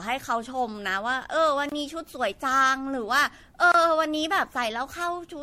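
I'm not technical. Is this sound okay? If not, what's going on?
No. Generation loss runs through the whole clip: the speech sounds swirly, hollow and smeared, with blurred starts to sounds. This is likely from the recording being saved in a compressed MP3 format about seven times over, each save adding fresh damage on top of the last.

There is also a gap between chunks at 1.69 s and again at 3.72 s, each a hard-edged silence of about 25 milliseconds. The audio was handled in two-second pieces, and a tiny hole was left where each piece joins the next.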